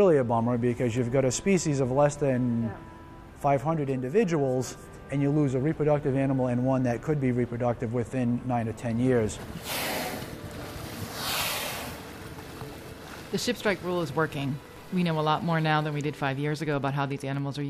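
From 12.15 s to 17.62 s a train of clicks runs over the sound, about 8.4 per second at an uneven pace, roughly fifty in all, each peaking about as loud as the audio itself. It is heard as irregular ticking that continues through pauses. The repeated pulses of much the same shape likely come from electrical interference or a faulty connection or power supply. On a spectrogram they appear as thin vertical broadband lines; the waveform shows sharp, similar spikes.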